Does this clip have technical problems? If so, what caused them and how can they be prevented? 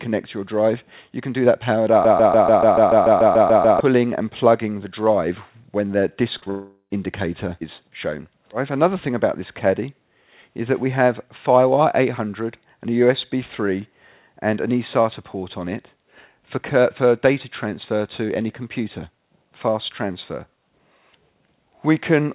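Yes, there are three kinds of fault.

Broken-record loop: from 2.05 s to 3.80 s, a 145 ms fragment of audio repeats exactly, back to back, 12 times. This is likely a stall in the player, encoder or stream, which kept resending the last fragment in its buffer. The audio that belonged in those 1.75 seconds never plays. Prevention: detect a stalled source and output silence or resynchronise, rather than replaying the buffered fragment.

Short concealed packet loss: two adjacent gaps are filled, one from 6.38 s to 6.44 s (about 40 ms missing) and one from 6.44 s to 6.48 s (about 20 ms missing). The decoder extended the preceding sound to cover each hole and then blended back into the real signal, which produces a brief smear or wobble. Prevention: allow the jitter buffer more depth and add forward error correction or redundancy, so that single late packets can be recovered.

Long network dropout: almost immediately after those gaps, from 6.50 s to 6.92 s, about 400 ms of audio fails to arrive, likely because of a network interruption. 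The receiver continues the last sound as a fading extrapolation, followed by roughly 60 ms of silence, and then the audio resumes further on without the lost portion. This happens on a G.711 mu-law call path, which carries nothing above 4 kHz. Prevention: improve link stability and use redundant or FEC-protected transport for bursts.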